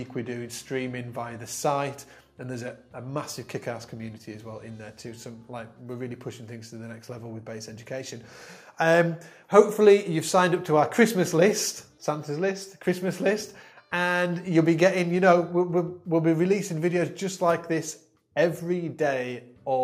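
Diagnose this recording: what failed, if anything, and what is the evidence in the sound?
Nothing failed; no fault is audible anywhere.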